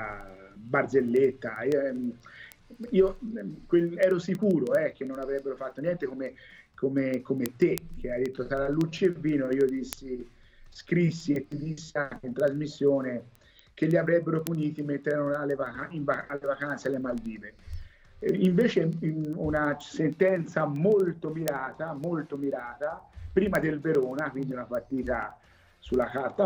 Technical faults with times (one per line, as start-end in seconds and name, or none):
0.13-26.42 word clock ticks